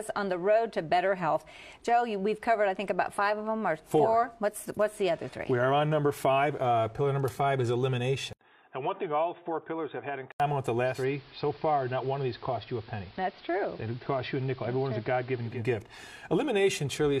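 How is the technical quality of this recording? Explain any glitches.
The recording has two clear technical faults, from around its middle onward.

From 8.33 to 10.40 s, the input appears to switch to a poorer device. There is a gap of 80 ms at the switch. After it, the band narrows, so the sound turns dull and boxy. It also drops by about 5 dB in level, and a faint new background noise appears. The likely cause is that the system swapped to another microphone or a headset call profile with a narrower band.

From 10.84 to 15.66 s, a digital radio blends to analogue. The receiver lost its digital stream and cross-faded over 0.21 s to the station's AM broadcast. AM carries a narrower band, so the treble falls away. The level drops by about 3 dB. Clearly audible hiss rises underneath. The sound stays this way until 15.66 s.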